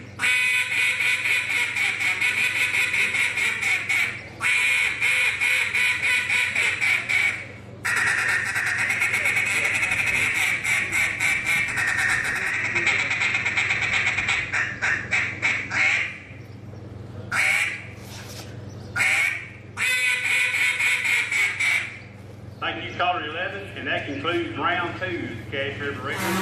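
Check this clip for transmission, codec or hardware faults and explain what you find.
One transmission fault: digital radio blending to analogue, 12.31 to 16.34 s. The receiver cross-fades over 325 ms to FM, bringing faint hiss and about 1 dB level shift. That hiss sets it apart from a plain codec bandwidth drop.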